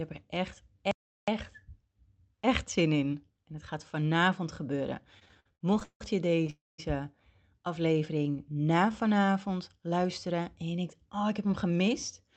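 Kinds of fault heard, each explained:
Playback stall: From 0.91 to 1.28 s the speech simply cuts to silence for about 0.36 s, then resumes where it stopped, likely because the player ran dry or its thread was blocked. Unlike a call freeze, there is no fading buzz, only a clean gap.
Repeated stalls (stutter): Between 5.19 and 6.5 s the speech breaks up 14 times as the jitter buffer repeatedly empties. Each break is bridged by a continuation of the last sound, 406 ms in all and nothing lost. The longest break is 174 ms, and concealment covers about 31% of that stretch, so it drags rather than stopping once.
Call audio freeze: From 6.5 to 6.8 s the last sound is drawn out as a fading buzz that decays into about 190 ms of silence, filling 282 ms in total. Speech then resumes where it stopped, now 282 ms later, likely because packets were held up in transit. It is a single, longer, concealed hold rather than a choppy series.
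Jitter buffer slow-down: From 7.87 to 9.34 s the speech runs at 88% speed while keeping its pitch. Repeated pitch periods and pause fragments add 188 ms, stretching sounds out. The pace changes without any break, which separates it from the stalls.
Jitter buffer speed-up: From 11.23 to 12.2 s the speech runs at about 106% speed at unchanged pitch, sounding slightly hurried. Around 70 ms of short pitch-period pieces are trimmed out to reduce buffered delay. It is the mirror of the earlier slow-down: compressed rather than stretched.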